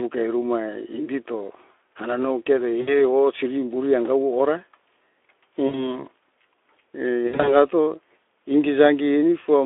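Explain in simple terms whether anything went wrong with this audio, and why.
Three short dropouts come from VoIP packet loss concealed by the speech codec, at 2.81 to 3.01 s, 5.67 to 6.02 s and 7.27 to 7.55 s. Pieces of the stream never arrived: about 60 ms each in the first two, and in the third several gaps spread over about 200 ms, the longest 60 ms. The Speex decoder, working on a narrow telephone-style band, filled each hole by stretching the last sound into a buzzy tone or a noise that fades, and the speech stays thin for a moment after the audio returns.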